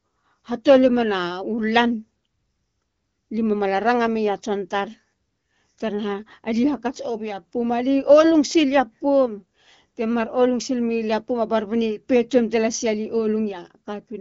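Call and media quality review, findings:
No faults found; AMR-WB speech path working normally.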